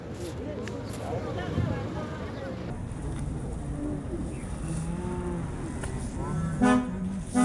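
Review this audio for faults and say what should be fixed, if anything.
From 2.70 s to the end, the sound drops a full octave (12 semitones) and runs at half speed, sagging and dragging. This is a wrong sample rate fault, consistent with 48 kHz samples clocked out at 24 kHz without conversion, which halves speed and pitch together. To prevent it, match the playback rate to the source rate or resample before output.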